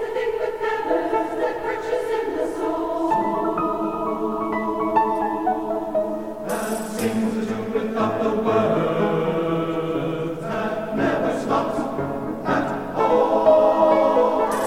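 No technical faults can be heard anywhere in this audio.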